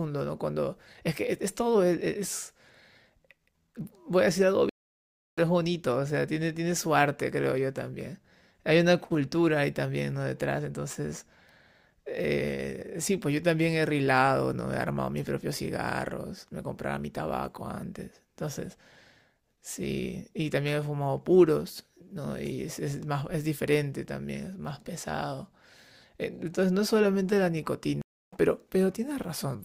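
At 4.69 s the speech drops out for 0.68 s, until 5.39 s, and resumes roughly half a second further along, so a short stretch is skipped. The pattern recurs at 28.02 s, with 0.31 s of silence ending at 28.37 s and a skip of roughly 0.3 s. Both are stream reconnects: the connection broke, playback stalled, and a fresh decoder picked up the live stream at a later point.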